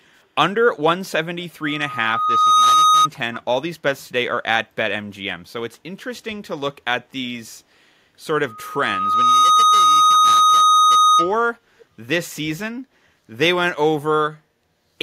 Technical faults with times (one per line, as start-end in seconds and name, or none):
1.62-3.08 loudspeaker feedback squeal
8.48-11.37 loudspeaker feedback squeal
11.79-11.85 echo leak